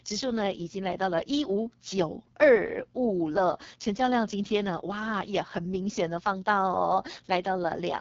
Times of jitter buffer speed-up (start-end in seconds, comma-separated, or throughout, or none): none